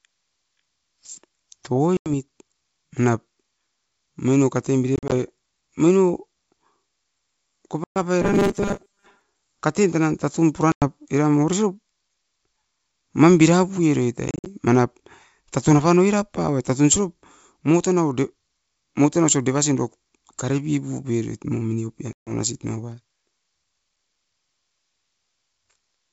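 Hard-edged holes cut the speech at 1.97–2.10 s, with about 90 ms missing, and at 4.96–5.13 s, where 90 ms goes in scattered gaps over 160 ms, the longest 40 ms. A third hole follows at 7.84–7.98 s, about 120 ms. Each time the speech comes back slightly distorted before settling. This is packet loss on an ADPCM call. Lost packets become silence, and the receiving decoder's adaptive predictor and step size drift away from the sender's until they resynchronise.

From 8.22 to 9.21 s the speech turns into a rigid, metallic buzz at 200 Hz that only loosely tracks the syllables. This is robotic sound from repeated short buffers. Audio arriving too rarely is likely the cause, with the player looping a 5 ms chunk to fill the time. Most of the real audio in that second is skipped. The 200 Hz buzz is simply the repeat rate imposed on the sound.

The packet losses continue at 10.72–10.88 s, just after "tan tatun pura", with about 100 ms gone. 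At 14.28–14.47 s, just after "mam bira puieroit", 120 ms is lost in scattered gaps over 180 ms, the longest 50 ms. The longest loss, about 140 ms, comes at 22.13–22.33 s. Each again ends in brief distortion. The underlying G.722 wideband coding at 64 kbit/s keeps the speech clear up to 7 kHz.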